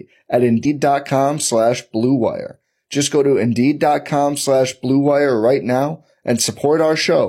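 At 0.61 s, compressed frames are skipped: about two whole frames, roughly a tenth of a second, are never decoded, so the speech lurches forward. Unlike a dropout, there is no silent gap.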